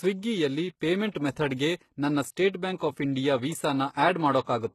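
Speech throughout, with a treble that sounds bright but synthetic. The sibilants come out gritty and metallic, and nothing at all sits above about 12.3 kHz. That's likely HE-AAC compression: the top band gets rebuilt from copied lower bands rather than coded, which fits a low bitrate around 16 kbps. There's also pre-echo on three attacks, at 1.11–1.15 s, 1.32–1.36 s and 2.76–2.80 s. A short hiss of about 35, 40 and 45 ms creeps in just ahead of each onset, because the codec's block noise leaks backwards into the quiet gap, so those attacks sound softened and smeared.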